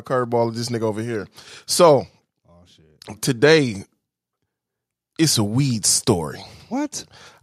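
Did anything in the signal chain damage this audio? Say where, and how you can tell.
Yes. In call processing, automatic gain rising: the gain control judged the speech input too quiet and ramped its gain up by about 4 dB from 0.1 to 2.07 s, just before "oh today". Voice and background noise swell together, which marks a gain change rather than louder talking.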